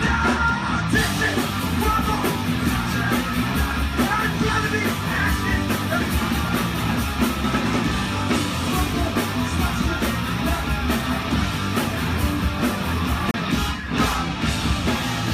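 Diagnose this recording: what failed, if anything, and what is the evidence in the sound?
A CD skip occurred at the playback stage. The laser lost its track and landed on a different turn of the disc's spiral, so the player muted and then resumed reading from the wrong place. In the sound, a silence of roughly 30 ms appears between 13.31 and 13.34 s, after which the audio carries on abruptly from a different point rather than continuing smoothly.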